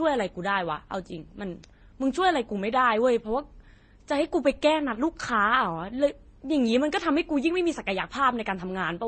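This speech clip has stacked artefacts of different kinds all the way through, heard together, and nothing above about 8.7 kHz. That points to transcoding between lossy codecs, likely an MP3-to-HE-AAC-to-Vorbis chain at low bitrates, around 30 kbit/s.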